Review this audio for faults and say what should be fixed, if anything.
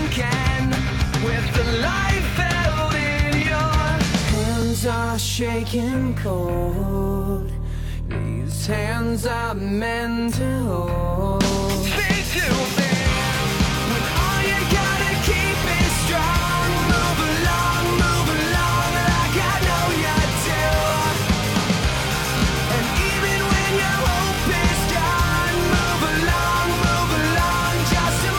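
Repeated buffer at 4.62, 8.52, 13.88 and 20.90 s, and twice over at 22.38 and 24.34 s. Late audio made a 20 ms block replay, heard as a hard-edged click or brief buzz. To prevent it, enlarge the playback buffer or raise the audio thread's priority.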